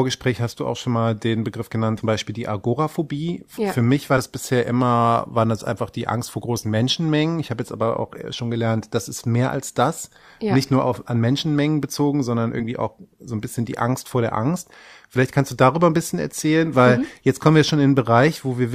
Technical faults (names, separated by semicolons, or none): compressed frames skipped